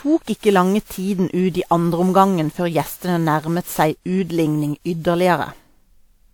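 Generation loss runs through the whole speech clip. The sound is swirly, smeared and hollow, and attacks blur. Nothing sits above 20.1 kHz. This likely comes from around ten rounds of WMA re-encoding, consistent with 128 kbit/s, each adding fresh quantisation noise.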